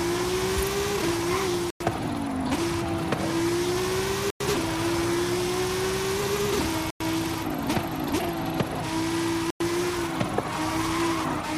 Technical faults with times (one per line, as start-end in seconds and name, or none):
1.70-1.80 gap between chunks
4.30-4.40 gap between chunks
6.90-7.00 gap between chunks
9.50-9.60 gap between chunks